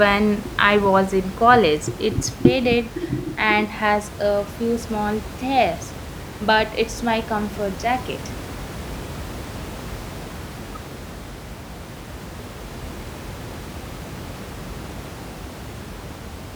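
No technical faults can be heard in this speech recording. Room noise from where the microphone sits stays about 14 dB below the speech, and that belongs to the recording itself rather than to the system.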